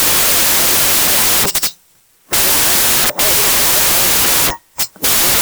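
From start to end, the speech suffers a wrong sample width. Audio written as 16-bit integers is read as packed 24-bit values. Most values mix mismatched bytes. Loud noise buries the speech, which runs 1.5 times fast and sounds high-pitched.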